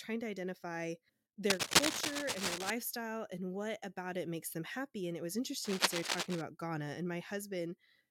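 After "to identify", from 1.50 to 2.70 s, cable scratch noise rides over the speech somewhat louder than it, and again after "it was", from 5.64 to 6.42 s, at about the speech's level. Dense, uneven scratching, unlike isolated clicks, points to a worn connector likely being moved.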